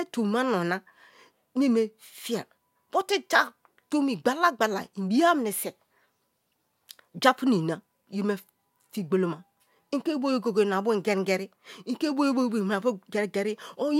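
Nothing goes wrong anywhere in this speech recording, so there's simply nothing to flag.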